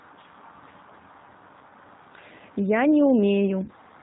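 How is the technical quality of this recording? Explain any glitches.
The quality is limited by a narrowband speech codec, with two brief concealed dropouts.

Throughout, the speech sounds slightly rough, synthetic and dull, with nothing above 4 kHz. This points to the G.729 codec at 8 kbit/s, rebuilding speech from a filter, pitch and sparse pulses.

From 1.59 to 1.62 s and from 3.64 to 3.71 s the speech is briefly stretched out and fades. This is VoIP packet loss concealed by the speech codec: the decoder extended its last pitch and filter over gaps of about 20 ms and 40 ms, which fits one and two lost packets.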